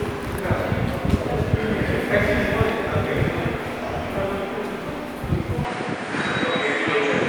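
At 5.65 s the sound abruptly loses its top end and stays that way to the end of the clip: nothing remains above 9.6 kHz, and a faint new background hiss, roughly 55 dB down, appears beneath it. The likely cause is an input switched to a poorer device partway through. There is no silence at the switch and no obvious level jump. What sets this apart from a simple filter or codec bandwidth drop is the change of noise floor and tonal colour together.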